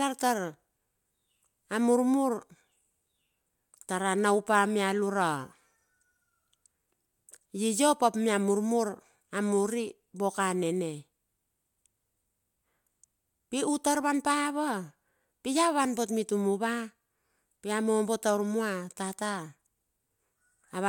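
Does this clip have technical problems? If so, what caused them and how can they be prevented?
No, no technical faults are audible.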